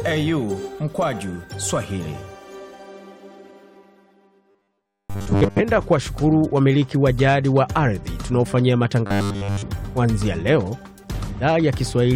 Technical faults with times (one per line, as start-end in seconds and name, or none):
4.51-5.62 robotic sound from repeated short buffers
9.06-9.62 robotic sound from repeated short buffers